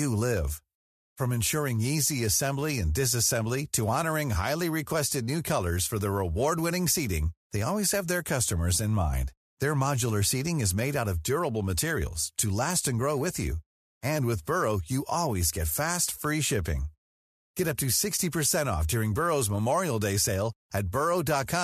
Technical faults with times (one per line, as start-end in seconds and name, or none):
none